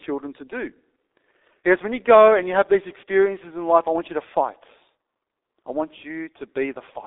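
From start to finish the speech carries heavy G.723.1 codec damage. Nothing survives above about 3.8 kHz and the line band runs roughly 300 Hz to 3.7 kHz, so the sound is muffled. The codec models the voice in long 30 ms frames and updates that model slowly, leaving a hoarse texture and smeared consonants, which fits a rate near 6 kbit/s. A plain telephone band-limit would sound thin but clean; here the voice itself is degraded.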